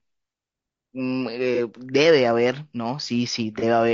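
Throughout, the speech was likely squeezed through low-delay AAC compression at a low rate, fitting about 32 kbps, leaving it rough and grainy with noise between harmonics. At 1.55–1.59 s and 3.59–3.64 s, single lost frames of AAC frame loss with concealment are patched from earlier spectrum, each a brief smeared, phasey blur.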